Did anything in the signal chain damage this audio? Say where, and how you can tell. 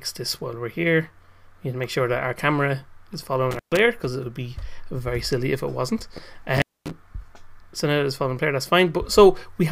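Yes. An intermittent contact in the analogue wiring breaks the sound twice, from 3.51 to 3.79 s and from 6.56 to 6.91 s. The line goes open for about 126 ms and then about 239 ms, with crackle at the edges of each gap and faint hiss in between. That pattern points to a loose cable or plug briefly losing connection. The scraping edges and hiss-filled silences come from the physical contact itself, not from a digital dropout.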